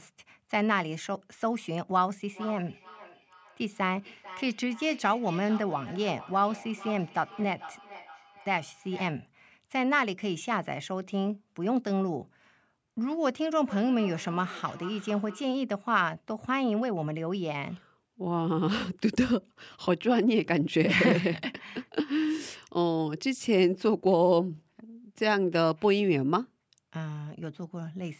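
Two devices on the same call sit close enough that one device's microphone picks up the other's playback, so this speech clip has feedback echo between two devices from 2.33 to 9.27 s and 13.66 to 15.57 s, repeating roughly every 0.4 s at about 17 to 18 dB below the speech.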